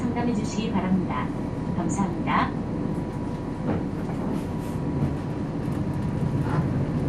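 From start to finish the audio carries plainly audible damage of the kind left by MP2 compression, likely at a low bitrate around 80 kbps. The sound is dull, with a gurgling, granular roughness. Upper sub-bands get too few bits, so they drop out and flicker back while the remaining bands are coarsely quantised. On a spectrogram the top end is cut off and patchy, with blocky gaps switching on and off over time.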